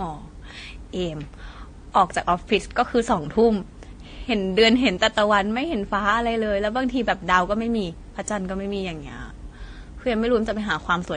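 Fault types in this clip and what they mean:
Transcoding between lossy codecs: throughout, nothing above 9.6 kHz, with two different kinds of coding artefact stacked, likely a low-bitrate AAC encode re-encoded as WMA.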